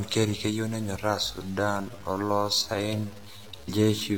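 From start to finish, the signal was likely truncated to about 7 bits with no dither. The rounding error tracks the speech, sitting only some 25 dB below it, so quiet stretches turn gritty and the grain shifts as the level changes: low bit depth without dither.

Right after "keyeu nenyoraa", at 1.23 s, a time-stretched section runs to the end of the clip, likely from software slowing the audio to about 0.6 times its speed while holding the pitch. The pace suddenly drags.

Between 3.65 and 3.70 s, compressed frames were skipped: the decoder failed to play a run of frames, so the audio jumps ahead by around 150 ms.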